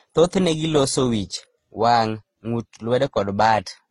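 A speech recording that was likely put through transcoding between lossy codecs: it carries the marks of Opus, then Vorbis, then HE-AAC, with bitrates in the range of about 24 to 34 kbit/s. Each later encoder spent its small budget re-encoding the previous one's artefacts, then added its own, so several kinds of artefact overlap throughout the clip. The lowest band limit in the chain survives: nothing is present above 11.4 kHz, dulling the top end.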